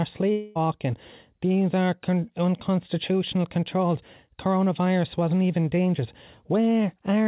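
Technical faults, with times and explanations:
0.32 to 0.57 s, long network dropout: the sound gives way to a fading buzz or hiss continuing the last sound for about 0.23 s, then resumes with that stretch missing. This is likely a network gap concealed by the receiver, heard through narrowband audio with nothing above 4 kHz.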